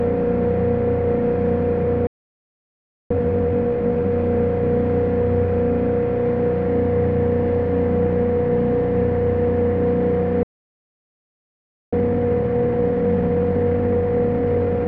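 At 2.07 s the sound cuts out for about 1.03 s, a playback stall. The player likely ran short of data. From 3.11 to 4.13 s, time-compressed catch-up runs at 2x speed. Small pieces are cut and cross-faded, so the sound hurries at normal pitch. A second stall silences the sound from 10.43 s for about 1.49 s. Catch-up then resumes at 1.25x from 11.93 s to the end.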